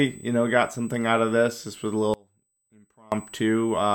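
USB whine runs throughout: a steady 8 kHz tone, roughly 25 dB below the speech, from the bus's 125-microsecond microframe current leaking through power or ground. An audio dropout to a faint residue follows from 2.14 to 3.12 s, just after "was a": the speech cuts off abruptly for about 0.98 s, leaving only faint sound roughly 30 dB down, likely because the signal was lost while the downstream path stayed live.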